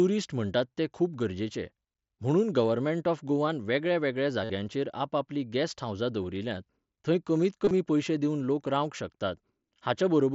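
Two spots of concealed Bluetooth headset packet loss show up. At 4.44 to 4.50 s about 52 ms of audio went missing between headset and phone, and the receiver papered over it by repeating the closest-matching bit of the last waveform, so you get a short buzzy hold with a slight warble as real sound returns. At 7.65 to 7.71 s, after "हावजां दवरिल्यांत थंय कमींत" and before "पयशे दिवन", 45 ms is lost in bits scattered over 60 ms, the longest only about 22 ms, so it's more of a few short buzzy patches over the mSBC wideband sound.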